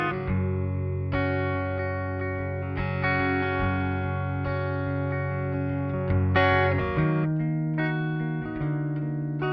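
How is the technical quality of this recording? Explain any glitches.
No technical glitches turn up anywhere in this music recording. There is nothing to explain, as no dropouts, clicks or other disturbances interrupt the audio at any point.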